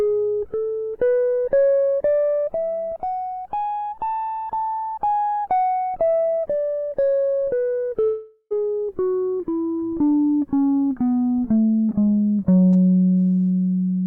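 Music, with a break from 8.03 to 8.53 s where the last sound smears into a fading buzz for nearly half a second, then drops to about 60 ms of silence before playback resumes with roughly half a second of material missing, likely a long network dropout.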